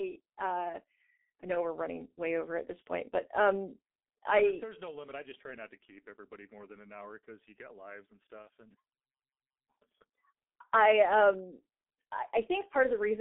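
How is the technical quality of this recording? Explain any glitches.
The recording is heavily degraded by a low-rate telephony codec throughout, with one short dropout.

G.723.1 codec: Across the whole clip the speech is confined to roughly 250 Hz to 3.5 kHz and sounds muffled and hoarse, with smeared consonants. The codec models the voice in coarse 30 ms frames at very low bitrate, consistent with a 6.3 kbit/s G.723.1 stream.

VoIP packet loss concealed by the speech codec: From 8.42 to 8.48 s, right after "you get lives and", the voice is briefly stretched into a buzzy tone or coloured noise that fades. The decoder filled a 30 ms gap, which fits one lost frame, by extending its last pitch and filter at falling gain. Recovery lags into the following audio.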